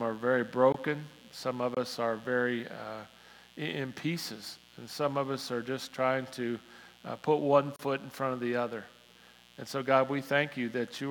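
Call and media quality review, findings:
Steady raspy buzz under the whole clip, roughly 30 dB below the audio. Mains buzz at 60 Hz. Probable source is a dimmer, rectifier or unshielded run injecting switching spikes twice per cycle, with harmonics stacking up into the kilohertz range.

Short hard-edged silent holes at 0.72 s, 1.75 s (about 22 ms) and 7.76 s (about 31 ms). Gap between stream segments in the player or packager. Timestamps of consecutive 1-second segments don't meet, so the player inserts silence. No audio lost.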